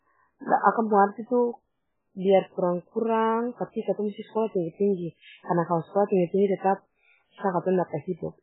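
Speech with MP3 compression damage across the whole recording. Nothing is heard above 3.8 kHz. Heavy watery swirling comes from weak frequency lines dropping in and out, and consonants are smeared. This points to a very low bitrate, likely near 8 kbps.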